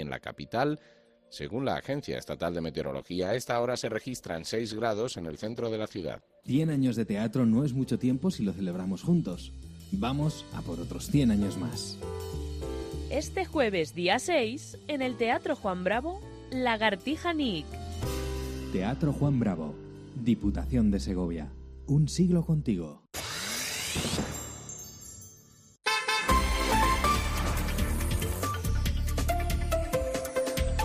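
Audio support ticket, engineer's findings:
Adaptive stream at a lower bitrate, 2.85 s to 6.85 s, about 4 s. Sudden drop in quality with no gap: codec artefacts rise. Probable component: stream delivery or adaptive bitrate logic. The player switched to a lower-bitrate version while the connection slowed, then switched back. The sound suggests Opus falling from around 64 kbit/s to around 16 kbit/s.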